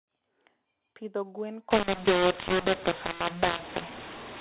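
A mu-law and A-law mix-up starts at 1.71 s and runs to the end of the speech. Up to that point the G.711 telephone coding sounds as expected, band-limited below 4 kHz. From 1.71 s, the mu-law-coded samples are decoded as A-law. The two logarithmic scales map the 8-bit codes differently, so levels come out scrambled: some too loud, some too soft, and near-silent samples lifted well above zero. The speech turns harsh and gritty, and pauses fill with noise.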